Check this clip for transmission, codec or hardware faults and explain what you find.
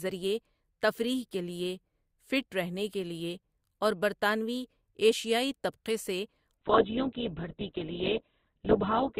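One transmission fault is present. From 6.57 s, right after "طبقے سے", until the end, the adaptive stream switches to a lower bitrate. The treble abruptly stops above 4.1 kHz, fitting an Opus drop from about 64 to 8 kbit/s, and the speech turns dull and coarse with no gap.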